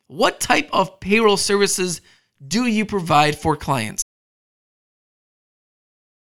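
At 4.02 s the speech cuts out into an audio dropout to silence that lasts to the end: dead silence, no room tone, unlike a fade or gate, likely from lost input.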